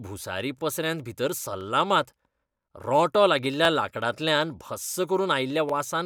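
Overlapping chunks occur at 0.59–0.61 s, 1.61–1.63 s, 3.65–3.67 s and 5.69–5.72 s. The speech was handled in 1.0 s chunks, each beginning before the previous one finished, so about 21 ms replays at every join. Each repeat is heard as a brief stutter or click.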